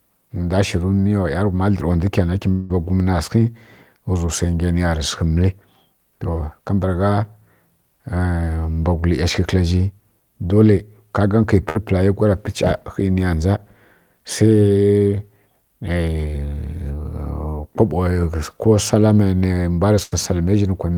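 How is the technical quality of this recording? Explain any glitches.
The recording has three transmission glitches where audio went missing and was patched over.

From 2.51 to 2.72 s there is a long network dropout, likely caused by an interruption on the network link. About 180 ms of audio never arrived, and the receiver stretched the last sound across the whole gap as a fading buzz or hiss, with no silent stretch. Speech then resumes further on. On a spectrogram this shows as a smeared, repeating patch that dims before normal speech returns. On a waveform it appears as a decaying, repetitive section.

There are two bursts of packet loss, from 11.69 to 11.77 s and from 20.03 to 20.14 s. They removed about 60 ms and about 80 ms of speech respectively. Each gap was filled by repeating the preceding sound at falling level, heard as a brief held buzz or hiss followed by a jump forward. Each looks like a short, fading, uniform patch in the spectrogram.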